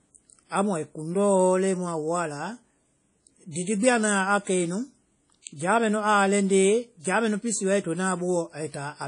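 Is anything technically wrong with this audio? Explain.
Yes, there are two faults. Throughout the clip there are artefacts of WMA compression, most likely at a low bitrate. The damage is plainly audible. Nothing is present above about 10.1 kHz, and the speech has a ringing, washy quality with hiss that rises and falls with the signal. This fits a transform codec working at around 32 kbps, where quantisation noise smears across long blocks and weak spectral lines are dropped.

From 3.51 to 3.56 s, just before "didi gbi a", there is pre-echo. A short hiss lasting about 45 ms comes ahead of the attack, and the onset sounds softened. The noise sized for the loud attack has spread back through the quiet start of the same transform block.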